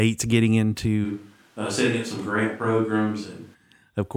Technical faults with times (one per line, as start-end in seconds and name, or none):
1.06-3.53 switch to a distant microphone